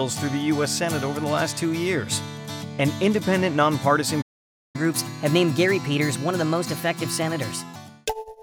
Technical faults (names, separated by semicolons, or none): playback stall; catch-up at higher speed